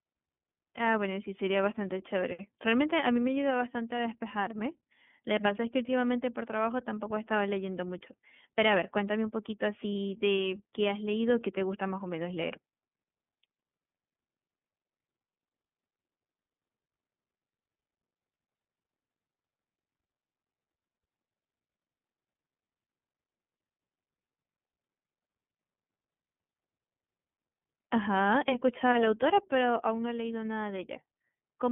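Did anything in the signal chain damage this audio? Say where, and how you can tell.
Yes, at the codec stage: iLBC coding throughout leaves a flat spectrogram ceiling near 3.4 kHz and a rough, synthetic texture from independently coded 30 ms frames.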